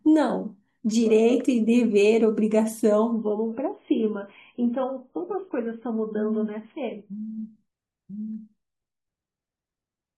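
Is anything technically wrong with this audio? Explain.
Yes. From 3.12 to 7.12 s the adaptive stream plays at a lower bitrate. The player switches to a much leaner encode, fitting roughly 16 kbit/s AAC, so nothing above 3.4 kHz remains and the speech turns dull and smeared. Unlike a dropout, the quality changes abruptly with no gap.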